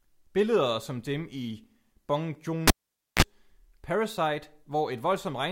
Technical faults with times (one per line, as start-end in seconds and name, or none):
2.67-3.22 cable pulled and plugged in